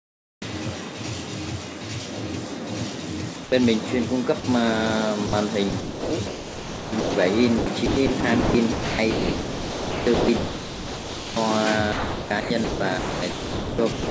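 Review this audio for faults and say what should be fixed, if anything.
From 0 to 0.42 s the background is a flat, featureless hiss that differs in level by about 4 dB, likely comfort noise in place of the background after discontinuous transmission.

Between 3.34 and 4.64 s, 5.70 and 7.14 s, 7.58 and 11.36 s, and 11.92 and 14.06 s, the sound breaks up repeatedly. This is sound chopped by the voice detector, likely its gating toggling transmission on and off. Roughly 0.14 s, 1.1 s, 2.7 s and 1.5 s of each stretch is replaced with fill.

At 5.26 to 5.32 s a 60 ms piece of the sound is replaced with comfort noise. This is sound dropped by the voice detector, likely a misjudgement of quiet material as background.

Through the G.722 call path the band stops at 8 kHz.

To prevent these faults, disable discontinuous transmission or lower the voice detector's threshold and lengthen its hangover time.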